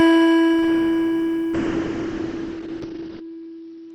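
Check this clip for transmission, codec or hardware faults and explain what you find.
There's one transmission fault here: a call bitrate drop from 1.54 s through the end of the music. The bandwidth estimate sagged, so the encoder went from 32 kbps to 6 kbps, coding far more coarsely and cutting the top end from 20 kHz down to 6 kHz. It turns dull and watery, staying at its worst for about 1.7 s.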